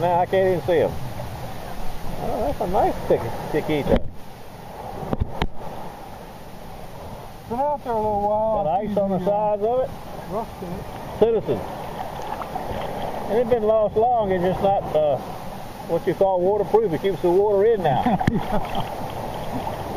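No technical faults can be heard anywhere in the audio. There is nothing in it to point to or time.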